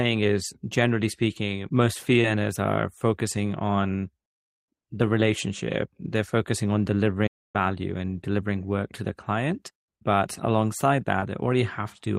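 At 7.27 s the player likely ran short of data, causing a playback stall: the speech halts after "focusing on" for about 0.27 s, then resumes with "and delivering".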